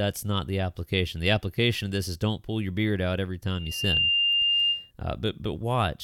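From 3.51 to 4.91 s, loudspeaker feedback squeal: the microphone re-amplifies its loudspeaker at 2.8 kHz, swelling within half a second into a bright horizontal spectrogram line.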